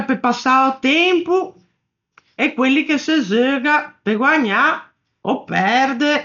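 Speech that sounds dull and boxed-in from start to finish, with nothing above 7 kHz and a rough, fluttering noise clinging to the voiced sounds. The damage is heavy and constant, which likely points to Dolby Digital compression at a starved bitrate, one that fits roughly 48 kbps. Short of bits, the encoder narrows the band and leaves many frequency lines without mantissa data, and the decoder fills them with dither noise, giving that grainy shimmer.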